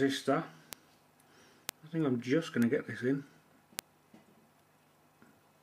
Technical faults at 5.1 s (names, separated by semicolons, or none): none